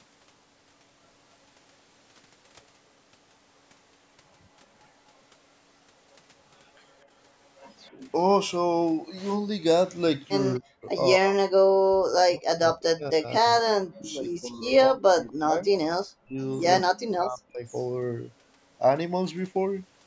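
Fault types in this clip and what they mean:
echo leak: The echo canceller likely let loudspeaker pickup through, so brief, faint copies of the sound return 251 ms late at 7.86, 10.55 and 15.28 s.
speech suppressed in double talk: With both sides talking, the echo canceller likely turned the talker down too, dropping speech by up to about 40 dB, longest from 11.19 to 15.72 s.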